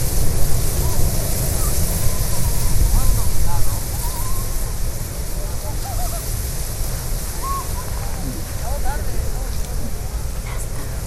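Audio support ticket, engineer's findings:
Dull, gurgling, granular distortion across the whole clip. Likely MP2 compression, at a rate that fits about 80 kbps. Starved upper sub-bands switch off and on. Spectrogram: ragged high-frequency ceiling, flickering rectangular band blocks.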